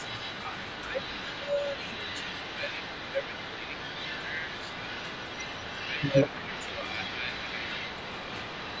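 From start to finish the speech carries an echo leak: a fainter copy trails the speech by 179 ms, about 10 dB down, most likely because a loudspeaker's echo canceller let it through. On a spectrogram, echoed harmonics reappear as a weaker ghost shifted right.

Between 0.89 and 3.74 s, and again from 5.88 to 6.81 s, there is speech suppressed in double talk. The talker dips by up to about 10 dB, in patches totalling roughly two seconds and then half a second, likely where the canceller ducked overlapping talk. The waveform envelope shows sudden notches, and the spectrogram's upper bands stop at 8 kHz throughout.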